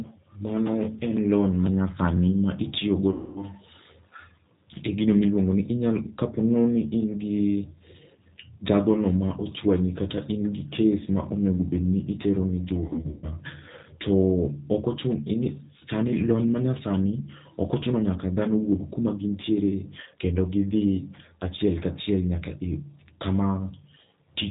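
A speech recording with a narrow, slightly rough and synthetic quality throughout: everything above 4 kHz is missing, and the voice has the rough, synthetic texture of a low-rate model-based codec. This is G.729 coding, consistent with an 8 kbit/s G.729A link. The codec rebuilds each 10 ms frame from a vocal-tract filter, a pitch predictor and a few sparse pulses rather than the actual waveform, so fine detail is discarded and the damage is plainly audible. Two dropouts break the flow. From 3.12 to 3.46 s the sound is stretched out and fades. From 12.87 to 13.28 s it breaks up again. Both are VoIP packet loss concealed by the speech codec. The first gap loses about 240 ms of audio, which fits eight 30 ms packets. The second loses about 210 ms, scattered over roughly 360 ms, with the longest run 120 ms. While packets are missing, the decoder keeps extrapolating from its last pitch and filter state and lowers the gain with each frame. 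Because every frame builds on the previous one, the voice stays weak or distorted for a short while after real packets resume.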